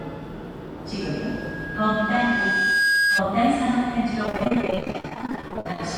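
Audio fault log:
1.00–3.25 s, loudspeaker feedback squeal: A steady tone at 1.6 kHz swells over roughly two seconds until it sits about 5 dB above the sound. A microphone is hearing its own loudspeaker, and the loop gain exceeds one at that frequency, so it keeps feeding itself.
4.26–5.80 s, repeated packet loss (robotic sound): Dozens of short dropouts, none longer than 46 ms, chop the audio. Each hole is patched by stretching the last fragment, and these patches cover about two fifths of the stretch. The repeated fills give a choppy, robotic texture.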